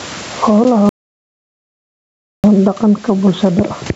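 Gain pumping runs through the whole clip. The level seems to be pushed well past what the microphone wants, and a fast limiter is likely clamping down on every loud syllable. The gain swings roughly ten decibels or so each time the speech gets loud. That squeezes loud and soft passages toward the same level and gives the speech a squashed, breathing quality.

At 0.64 s there's a block of digital silence, only about 11.6 ms long, which fits a 512-sample buffer that didn't get filled in time and went out as zeros. Because the signal drops straight to nothing and snaps back without any fade, and at this length, it comes across as a single sharp tick rather than an audible hole.

Then from 0.89 s to 2.44 s the audio drops out to silence for roughly 1.5 seconds. The speech cuts off mid-flow and comes back just as abruptly. The gap is silent, with no room tone in it, so the background noise present elsewhere vanishes completely. 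That points to the input being lost, likely a link failure or a momentary mute while the recorder kept writing silence. Whatever was said in that stretch is simply gone.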